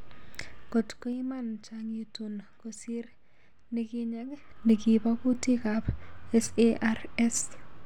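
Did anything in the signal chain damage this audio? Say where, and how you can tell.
Yes. Zipper noise from the gain or buffer stage: ticking from 0.59 to 1.15 s as the level falls about 15 dB before "iman chang itung kosr", and 4.27 to 4.71 s as it rises about 15 dB before "kutik ap". Unsmoothed 2 dB steps, roughly ten to fifteen per second, each click.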